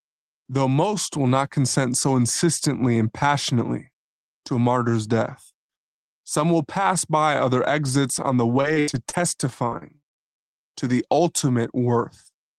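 From 8.55 to 10.39 s, repeated packet loss makes the speech choppy and robotic. Around a dozen holes, the longest 79 ms, are patched by extending the previous sound. The spectrogram shows frozen, smeared harmonic bands broken by blank vertical slots.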